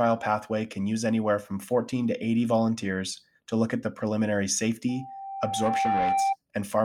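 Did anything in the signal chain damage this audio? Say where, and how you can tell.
Yes. The damage happens at the analogue stage, where microphone and loudspeaker share the room. Right after "look at the preliminary", at 4.89 s, a steady 784 Hz tone appears. It swells over about a second into a loudspeaker feedback squeal, ending around 5 dB above the speech. It stops at 6.36 s. The cause is an acoustic loop. The loudspeaker's output reaches the microphone, and at 784 Hz the loop gain passes one, so that tone keeps feeding itself.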